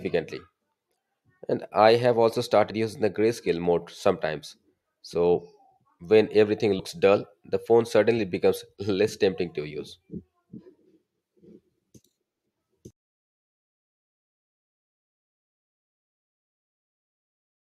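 Compressed frames are skipped twice in this speech. At 2.70 to 2.72 s, between "I have also" and "using the grayscale mode", about two frames, roughly 50 ms, drop out. At 6.78 s, after "when everything", about three, roughly 70 ms, go missing. The jumps fit a 23.2 ms codec frame, and the overlapping neighbours leave a brief smeared blip.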